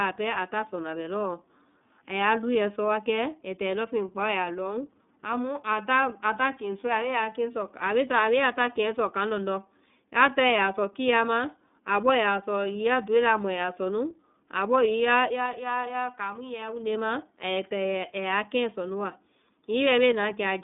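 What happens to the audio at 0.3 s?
The speech at 0.3 s, as everywhere in the clip, carries iLBC codec damage. This narrowband voice codec rebuilds each short frame's excitation on its own, and the sound points to 30 ms frames at roughly 13 kbps. The result is plainly rough and synthetic, with a boxy telephone quality. On a spectrogram, energy stops sharply near 3.6 kHz and thins below 200 Hz.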